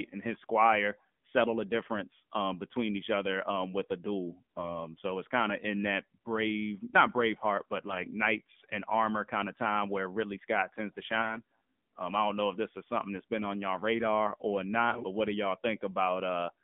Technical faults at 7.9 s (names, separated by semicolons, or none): AMR narrowband mobile codec; AMR bit errors